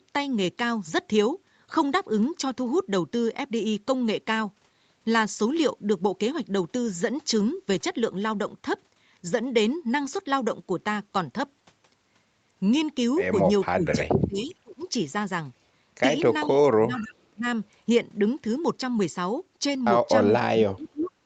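Speech over a call path that tops out at 8 kHz, with two kinds of fault late in the clip. The first is speech suppressed in double talk. The voice dips sharply at 13.72 to 14.83 s, 16.67 to 17.45 s and 20.52 to 21.12 s. It drops by up to about 25 dB in the first stretch and about 35 dB in the others. The likely cause is both sides talking at once, so the echo canceller ducks the near talker along with the echo. The second is echo leak. Short delayed copies of the voice come back at 13.87, 14.5, 16.46, 16.97 to 17.14 and 21.0 s. Each trails the original by 0.44 s. They sit about 20 to 35 dB below the speech. They are brief scraps. The likely cause is a loudspeaker at the far end whose echo canceller lets part of the pickup through.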